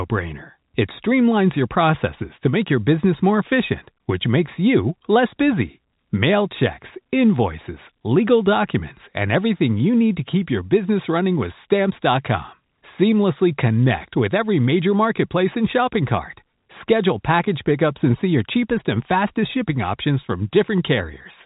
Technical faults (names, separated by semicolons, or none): none